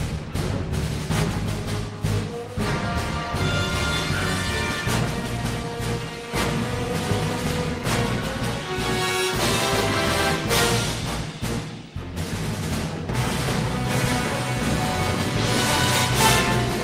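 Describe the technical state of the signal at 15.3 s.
At 15.3 s the signal is intact, with no audible fault at that point.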